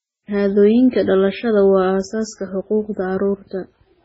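Likely MP3 compression runs through the whole speech clip. Nothing is heard above 7.7 kHz, and the heavy damage fits a very low bitrate near 16 kbps. Starved of bits, the encoder cuts the treble and zeroes weak frequency lines frame to frame, leaving a watery, swirling texture.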